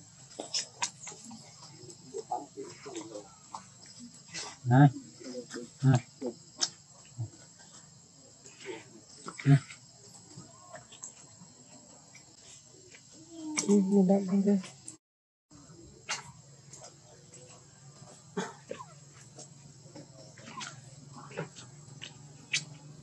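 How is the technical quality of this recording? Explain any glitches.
No glitches turn up anywhere in the recording, so there is nothing to account for.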